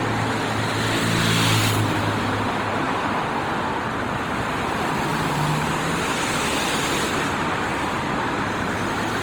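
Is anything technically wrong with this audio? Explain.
Yes. Throughout the recording, the sound shows generation loss, most likely from being encoded and decoded through a lossy codec about seven times, with the character pointing to Opus at around 48 kbit/s. Each fresh pass requantises the signal on a shifted frame grid, so noise accumulates rather than staying fixed. The result is swirly, smeared and hollow, beyond what that bitrate alone would give, with blurred attacks, even though content still reaches about 20 kHz.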